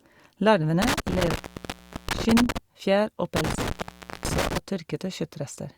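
At 0.82 s the speech cuts out in an intermittent contact fault, and it happens again at 3.36 s, over spans reaching 2.58 s and 4.58 s. A loose plug or cable breaks the signal path, leaving gaps of about 730 ms and 540 ms. Unlike a clean digital dropout, each break is framed by scratchy crackle where the contact opens and closes, and faint hiss rather than dead silence fills the gaps.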